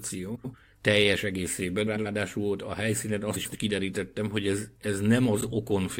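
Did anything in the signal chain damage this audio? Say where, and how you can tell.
Yes, frames out of order in network delivery: at 0.35–0.55 s (before "teljes egészében"), 1.86–2.06 s, 3.35–3.56 s (after "a helyszínen") and 5.40–5.52 s, two adjacent blocks of about 93 ms play swapped. Each swap is a garbled flutter. On a spectrogram, harmonic contours jump at the joins, and no time is lost.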